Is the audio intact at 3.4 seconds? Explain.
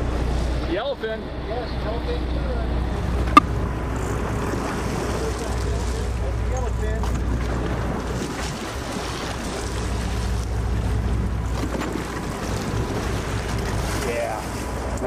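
No. From 3.37 to 3.39 s, about 22 ms, there is damaged data in a compressed stream. The bytes at that point are corrupt, so the decoder misreads or rejects those frames, loses sync and has to hunt for the next valid frame header. The result is a very short glitch cutting into the audio. A waveform would show an abrupt break in continuity over that span. A spectrogram would show a narrow vertical smear that does not match the surrounding content.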